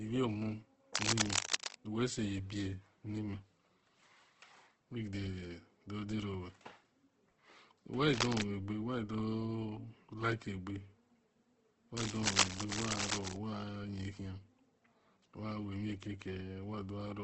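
Opus compression runs through the whole speech clip and is likely the cause of its coarse, grainy texture. Nothing is present above 8.2 kHz, which fits a wideband setting at a low rate around 12 kbps. The damage is heavy: short of bits, the music-style CELT mode fills bands by folding lower content or injecting noise, so the speech sounds rough and hissy rather than clean.

Cable scratch noise, likely from a worn cable or connector being moved, appears from 0.94 to 1.75 s, somewhat louder than the speech, then from 8.14 to 8.43 s just before "wa do", and again from 11.97 to 13.37 s, both times about as loud as the speech. Rapid changes in contact resistance add dense, uneven bursts that come through as scratching and rustling over the sound.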